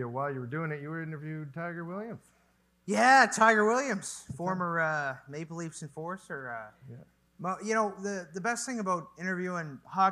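No technical faults are audible.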